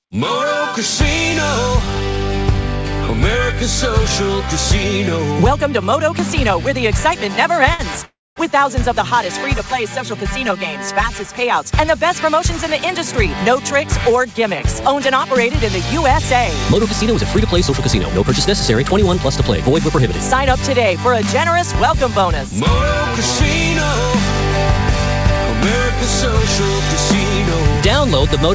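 At 7.74 s, a short stall from a late packet holds the current sound for 50 ms, to 7.81 s, with a faint buzzy sustain before the audio resumes from the same point. It is a brief stretch rather than a dropout, so nothing is skipped, and it is far shorter than the freeze that follows.

From 8.05 to 8.38 s, a call audio freeze inserts 311 ms: the last sound decays into a fading buzz, then about 230 ms of silence, before playback picks up exactly where it stopped with nothing lost. The likely cause is packets held up in transit, draining the jitter buffer. Unlike the earlier stall, it is long enough to fall silent.

Between 9.53 and 11.35 s, channel delay produces comb filtering. One channel arrives roughly 5 ms late, and the mono sum cancels at evenly spaced frequencies, starting near 100 Hz. The result is a hollow, phasey colouring with fixed notches rather than any timing gap.

Two jitter buffer speed-ups follow. 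From 12.25 to 15.43 s the audio runs at 102%, with about 70 ms removed. From 21.06 to 22.61 s it runs at 103%, with about 50 ms removed. In both, many tiny pitch-period slices are cut, so the audio runs faster while pitch stays unchanged, which sets it apart from a resampling speed change. All of this passes through the G.722 call path at 64 kbps, which leaves nothing above 8 kHz.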